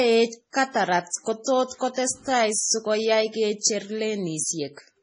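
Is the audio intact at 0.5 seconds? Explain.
No. From 0.51 to 0.54 s there is pre-echo: a short hiss smears about 34 ms ahead of a sharp attack, and the attack itself lands soft. The codec spread its quantisation noise across the whole transform block, so noise scaled for the loud onset also fills the quiet instant before it. Unlike a click or dropout, nothing breaks or goes silent. The noise simply arrives early, ahead of the onset.

Around that moment, as through the whole clip, the speech carries heavy damage from likely MP3 compression at a low bitrate, which fits roughly 24 kbps. Nothing survives above 10.5 kHz, so the treble is cut flat rather than rolling off gradually. Weak frequency lines switch on and off from frame to frame, which gives a watery, swirly texture and metallic chirps on s sounds. That continuous swirl sets it apart from the single, brief pre-echo hiss.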